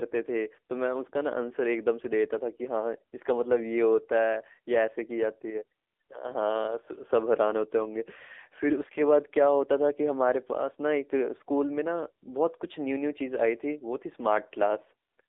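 From start to finish the speech has been through the AMR narrowband mobile codec, the old 2G/3G phone coder. Everything sits in a band of roughly 300 Hz to 3.6 kHz, so there's no real low end and nothing airy up top. The coder rebuilds the voice from a simple vocal-tract model and a few pulses per subframe, and here the damage is plainly audible: a buzzy, synthetic edge that fits a low mode around 7.4 kbps.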